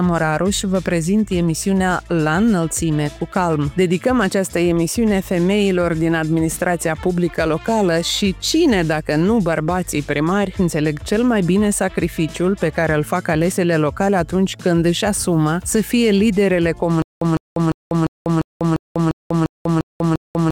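Stutter with silent gaps from 17.02 s to the end: a 155 ms fragment repeats ten times, each followed by 193 ms of digital silence, a steady 348 ms cycle. A stalled stream likely replayed its last fragment at each retry, losing the sound in between.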